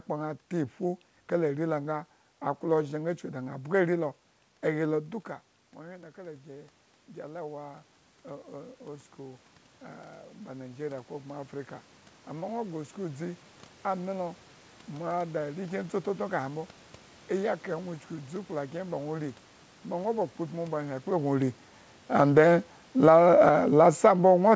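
At about 5 s the talker moves away and the voice drops by about 15 dB. The automatic gain control hears the input as too quiet. From 5.83 s it starts raising its gain. The rise is slow and lasts until 15.82 s, about 10 seconds in all. It adds about 13 dB. Voice and room noise swell up together. The background noise grows along with the speech, so the level creeps back rather than snapping back.

Near 21 s the talker comes back toward the microphone, and the level jumps. The gain is still set high from the earlier boost. At 22.13 s the automatic gain falling begins. The control finds the input too loud and starts pulling its gain down. The sound is loud at first. Then it sinks steadily, room noise included, through to the end of the clip at about 24.6 s. The fall never settles before the audio stops.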